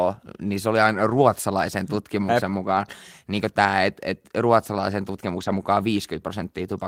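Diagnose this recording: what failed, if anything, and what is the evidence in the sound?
Network loss recovered as lost packets rebuilt from error correction: no gaps, but rougher, noisier stretches at 1.09–1.19 s, 2.49–2.51 s and 5.35–5.61 s, where low-bitrate redundant copies were decoded.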